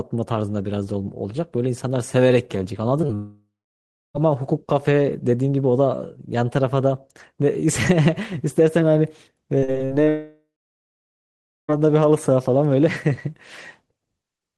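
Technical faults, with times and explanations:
3.01–3.05 s and 3.07–3.11 s, short concealed packet loss: twice in quick succession, about 20 ms of audio failed to reach the decoder in time, and the receiver bridged each hole by carrying the preceding sound forward before blending back into the real signal. Each patch is brief enough to register only as a small smear or wobble in the speech.
3.15–4.16 s, long network dropout: roughly a full second of audio never arrived, most likely because the network stalled. The receiver first extended the last sound as a fading buzz or hiss, but that synthetic tail runs out and about 0.67 s of near-silence follows. The speech then resumes further along, with the missing second simply gone.
9.58–10.09 s, repeated packet loss (robotic sound): six separate gaps hit this half-second, the longest about 45 ms, totalling around 180 ms of lost audio. Each gap is patched by continuing the previous sound, and the next loss arrives before the speech has settled, so about 36% of the span is concealment rather than real signal. 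The result is choppy speech with pieces dropped out.
10.09–11.70 s, long network dropout: immediately after the choppy stretch, about 1.6 s of audio fails to arrive. The receiver's concealment briefly sustains a decaying imitation of the last sound, then gives out, leaving roughly 1.23 s of silence or low steady noise. When audio returns, it picks up later in the speech, and everything from that 1.6 s is absent.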